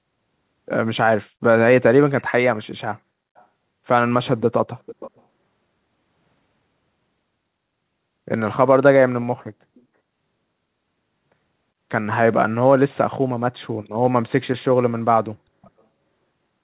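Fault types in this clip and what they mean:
Echo leak: A faint delayed copy of the speech, about 0.4 s late, likely from a loudspeaker echo canceller letting some through. Brief scraps mostly, with a louder stretch near 4.8 s.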